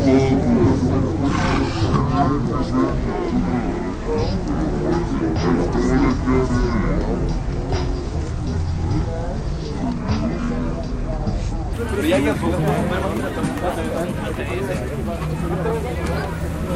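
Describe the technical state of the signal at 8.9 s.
At 8.9 s the sound is dragged low and slow, sitting roughly ten semitones below where it belongs. This is a section at the wrong speed, running from 0.0 to 11.73 s at 0.55 times normal rate, likely from playback against a mismatched clock.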